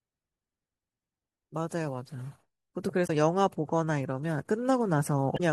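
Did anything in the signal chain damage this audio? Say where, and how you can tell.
Yes, at the codec or storage stage: damaged data in a compressed stream. Brief garbled blips break the speech at 3.04–3.10 s and 5.34–5.40 s, where the decoder misreads corrupted frames and resyncs. A spectrogram shows abrupt smeared blocks, and the waveform shows sharp discontinuities.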